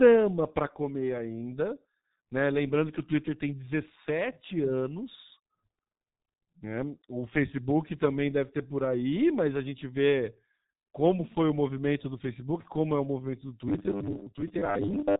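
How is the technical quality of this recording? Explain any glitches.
The recording is heavily degraded. It carries codec damage from start to finish, and in its last second and a half the speech collapses into a mechanical buzz.

Throughout, the sound has the signature of the G.723.1 codec. Nothing reaches above about 3.8 kHz, so the speech is muffled and dull, and the damage is heavy, at about 6.3 kbit/s. The codec models the voice in long 30 ms frames that update slowly, so consonants smear together and the tone turns hoarse. Plain low-pass filtering would muffle the sound but leave it smooth. Here there is also grainy, blurred articulation.

From 13.69 s to the end, right after "é o movimento do", the speech becomes a rigid metallic buzz at 100 Hz. This is robotic sound from repeated short buffers, and the likely cause is audio arriving too seldom. The player fills each gap by replaying the last chunk of roughly 10 ms, which fits a 10 ms buffer, and about half the real audio is lost. 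Unlike the codec's constant hoarseness, this buzz has a fixed rate, while still tracking the word rhythm loosely.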